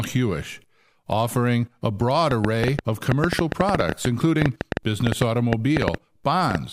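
Just after "offering a broad", at 2.31 s, a train of clicks begins and runs to 6.56 s. Some thirty sharp ticks arrive unevenly, about 7.3 per second. They stand well above the speech, around 20 dB. Nearby electrical interference is the likely cause.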